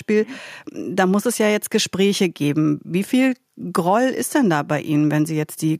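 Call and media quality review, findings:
No technical faults found; the signal path shows no audible defects across the clip.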